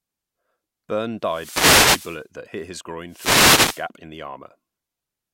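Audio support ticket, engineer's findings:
Wireless microphone noise hit, 1.23–2.27 s: burst of hissing static swells over the speech, ending just before "that hit his". Probable component: analogue FM radio link. Reflected signal cancelling, carrier fades, receiver noise rises.

Second noise hit, 3.08–3.87 s: shorter swish right after "that hit his", clearing before "in the". Same FM link, same multipath fade.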